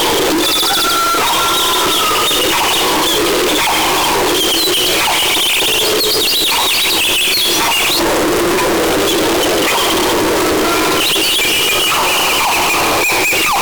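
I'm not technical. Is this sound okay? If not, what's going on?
No. Throughout, this is a float read as integer fault, likely 32-bit float audio read as 32-bit integer. Unlike ordinary overload distortion, everything is uniformly blaring, even quiet background, though pitch stays recognisable.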